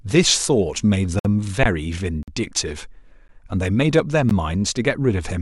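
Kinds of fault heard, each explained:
Gap between stream segments: the timestamps of consecutive pieces of the stream fail to meet, so the player pads the mismatch with silence and no speech is lost. Here hard-edged holes fall at 1.19, 2.23, 3.28 and 4.29 s, lasting about 55, 48, 11 and 14 ms, a once-per-second rhythm that fits one-second segments. On a waveform each is a clean flat stretch at zero; a spectrogram shows narrow, fully blank vertical stripes.
Underrun with held sample: the output buffer ran dry and the converter froze on its last value until data arrived again. At 1.63 s the waveform goes flat for about 21 ms, which fits a 1024-sample buffer. Roughly 20 ms of live speech was skipped.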